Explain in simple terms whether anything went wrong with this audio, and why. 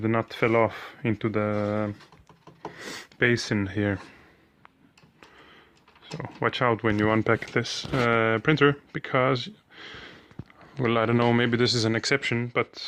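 From 1.12 to 6.37 seconds there is a call bitrate drop. The connection gave the sound far less data, so it turns rough and muffled, worst for about two seconds.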